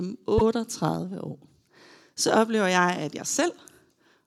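Repeated frames occur at 0.37 to 0.41 s, where a 24 ms block of the speech plays twice in a row. A piece of the compressed stream was written or delivered a second time, and the decoder played the duplicate as if it were new audio. The result is a very short stutter, which points to a single compressed frame being repeated once. Because nothing was skipped to compensate, the clip runs 24 ms longer.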